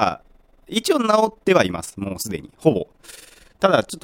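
Overlap-add ripple runs through the whole speech clip: the windowed frames were recombined with an overlap whose gain does not sum evenly, so the level swells and dips by about 11 dB around twenty times a second, giving a rough flutter.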